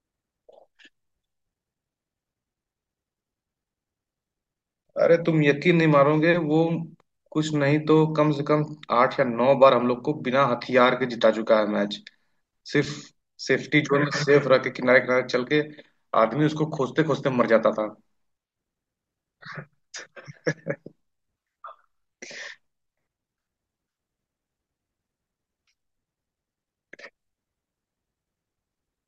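Nothing in this speech recording stands out as a technical fault, so there's nothing to point to at any moment along the way.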